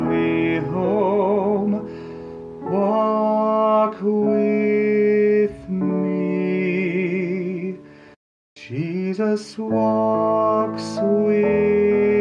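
No technical faults can be heard anywhere in this audio.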